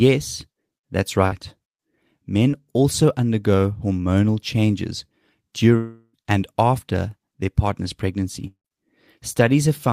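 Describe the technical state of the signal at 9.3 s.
At 9.3 s the signal is intact, with no technical fault to be heard at that point in the speech.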